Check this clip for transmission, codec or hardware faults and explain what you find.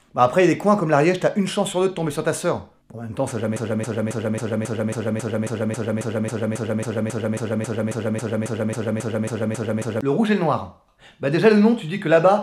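One fault is present: a broken-record loop from 3.56 to 10.01 s. A 272 ms fragment repeats exactly, back to back, 24 times. The likely cause is a stalled player or stream resending its last buffer. The audio due in that span is lost.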